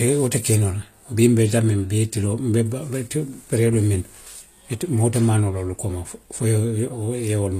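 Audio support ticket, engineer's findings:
HE-AAC compression, throughout, 0 to 7.6 s. Plainly audible codec damage on the speech: gritty, metallic sibilants, lispy s sounds, treble bright but synthetic. Likely a low-bitrate HE-AAC encode, around 24 kbps judging by the damage. Spectral band replication rebuilds the top end from copied lower bands, so harmonics misalign across the crossover. Band empty above 14.9 kHz.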